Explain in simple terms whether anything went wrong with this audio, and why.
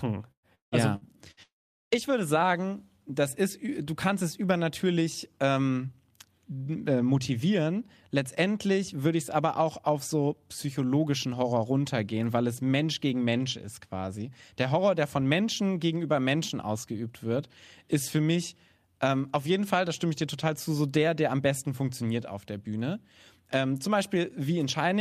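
Right at the start, between 0.31 and 1.40 s, there's repeated packet loss (robotic sound). Four little chunks of the speech never made it through, the longest about 170 ms. Each time, the receiver papered over the hole by stretching out whatever it had just played, so roughly a third of that stretch is filler rather than real speech. That's why it comes across choppy, with bits clearly missing.

Straight after that, from 1.43 to 1.94 s, the sound cuts out for about half a second. There's a brief smeared tail of the last sound, then near-silence for around 0.4 s, and the speech picks up again at "würde sagen das ist" with the missing part simply gone. That pattern points to a long network dropout as the likely cause: nothing arrived for that stretch, so there was nothing left to play.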